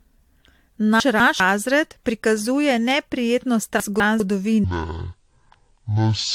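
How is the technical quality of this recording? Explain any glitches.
The recording has three kinds of fault: codec damage throughout, two jumbled moments, and a slowed ending.

Generation loss runs through the whole clip. The speech sounds swirly, hollow and smeared, with soft attacks. This likely comes from repeated AAC-LC encoding at 96 kbit/s.

Chunks out of order occur at 1.0 to 1.4 s and at 3.8 to 4.2 s, the second just after "prikazuje neprijetno". In each, a 200 ms piece plays one chunk late. The result is a garbled jolt.

A section at the wrong speed runs from 4.64 s to the end. It plays at 0.506 times normal speed, about ten semitones low, sounding deep and dragging. A wrong clock during editing or playback is the likely cause.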